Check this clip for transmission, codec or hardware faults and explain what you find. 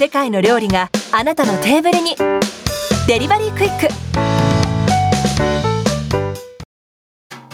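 One fault runs through the whole clip: gain pumping. The level swings by about 25 dB. Loud and quiet passages sit unnaturally close together, so the sound is squashed. The likely cause is input gain set far too high for the microphone, with a fast limiter or compressor clamping down on each peak and releasing as soon as it passes.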